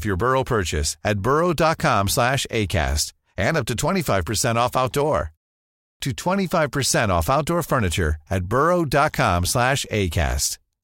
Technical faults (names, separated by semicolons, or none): clipped start after a pause